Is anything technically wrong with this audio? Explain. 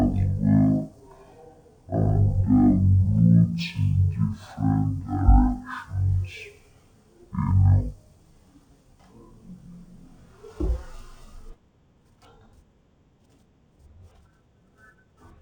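Yes, the whole clip has been opened as stereo read as mono, and it runs from start to finish. The left and right samples, which alternate in the file, got played back one after another as though they were a single channel. So the speech runs at half speed and sits a full octave, 12 semitones, lower, sounding slow and sluggish. There's also a faint mirrored copy of the sound up in the top half of the spectrum.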